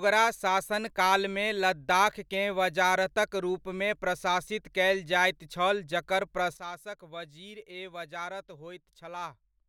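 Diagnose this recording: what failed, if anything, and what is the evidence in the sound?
At 6.57 s the speech drops abruptly by about 12 dB, and the background noise falls with it in the same instant, staying at the lower level through to the end of the recording. That the noise floor moves in lockstep with the speech points to a sudden gain jump rather than the talker moving away. The likely cause is a digital gain setting applied in the processing chain without a ramp, changing the level from one sample to the next.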